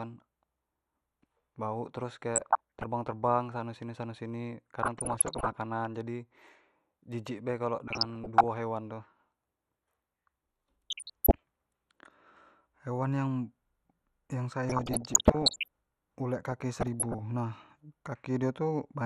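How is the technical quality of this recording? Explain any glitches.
The technical quality is poor: there is constant codec damage and six bursts of reception errors.

MP2 compression runs through the whole speech clip. The top end is dull and the remaining sound has a gurgling, granular roughness. The likely cause is MPEG Layer II coding at a low rate, consistent with about 80 kbps. With that few bits, the encoder shuts off upper sub-bands and quantises the rest coarsely, so the treble flickers and the detail smears.

DAB burbling appears at 2.35–2.86 s, 4.83–5.57 s, 7.88–8.44 s, 10.90–11.42 s, 14.68–15.68 s and 16.51–17.19 s. Bit errors got past the error correction into the audio data, so wrong samples put short blips of noise into single sub-bands. The result is short noise blips over the speech. The bursts at 4.83 s and 14.68 s are the densest, with the longest lasting a full second.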